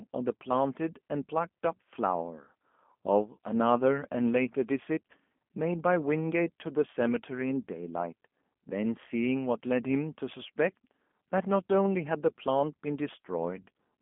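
Throughout, G.729 coding at what sounds like 8 kbit/s leaves the speech rough and synthetic, with nothing above 3.5 kHz. Unlike plain band-limiting, the frame-by-frame pulse rebuild adds a buzzy graininess.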